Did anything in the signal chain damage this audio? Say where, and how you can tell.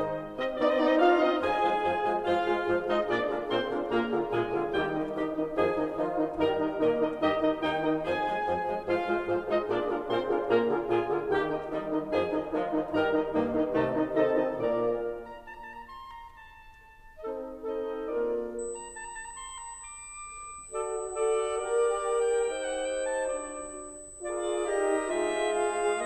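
Yes. From 18.59 s to the end, USB whine sits at a fixed 8 kHz, roughly 15 dB below the music. Current drawn in the bus's 125-microsecond microframes is leaking through power or ground in the analogue wiring. A spectrogram shows a thin, unwavering horizontal line at 8 kHz.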